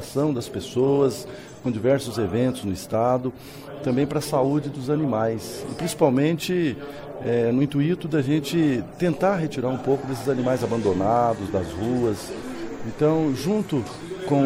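Nothing technically wrong turns up anywhere in this audio, so there's no fault to time or trace to a cause.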